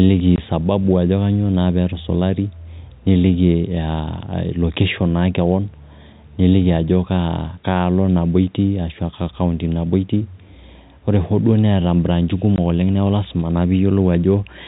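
A speech recording carried over a telephone-style link shows packet loss filled with silence. Twice a single stretch of audio, consistent with one 20 ms packet, failed to arrive and the receiver played nothing in its place: from 0.36 to 0.38 s, just before "sababu ajo kanyoo naa", and from 12.56 to 12.58 s, between "hoo duo neeta imbraanchi" and "oleng neeku lazima naa". Each gap is a brief hard-edged dropout, heard against G.711 telephone coding's band stopping at 4 kHz.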